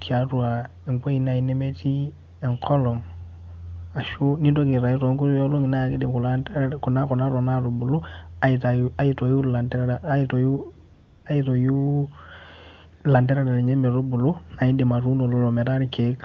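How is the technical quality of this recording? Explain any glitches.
There's one glitch worth flagging: a short stretch of AMR comfort noise from 10.93 to 11.25 s. For about 320 ms the phone decided nobody was talking and stopped sending speech frames, so the receiver filled the gap with synthetic noise built from a rough sketch of the background's level and spectrum. You hear the real room sound swap for a smooth, steady hiss, then snap back. The speech around it is clear wideband HD Voice, which fits one of the higher AMR-WB rates.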